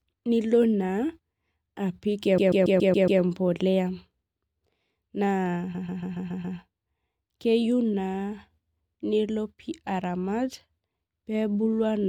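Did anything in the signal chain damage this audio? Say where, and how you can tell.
Yes. The damage is repeated frames at the codec or storage stage. From 2.37 to 3.21 s, and again from 5.74 to 6.57 s, the same 139.3 ms block of speech plays six extra times. That is a stutter, and each event adds about 0.84 s. The block fits a run of about six compressed frames written seven times. A buffer underrun would leave gaps, but here every repeat is identical and nothing is lost.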